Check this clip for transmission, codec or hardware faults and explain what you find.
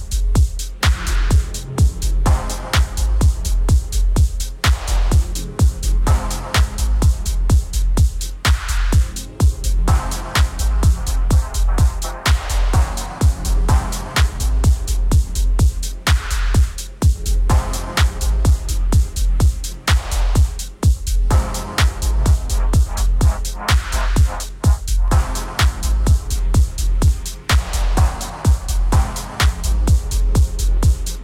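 One hardware fault is present. From 23.07 to 31.07 s, periodic USB or driver dropouts recur every 2.0 s. The interface briefly stalls, skipping about half a millisecond each time. Each gap sounds like a regular tick.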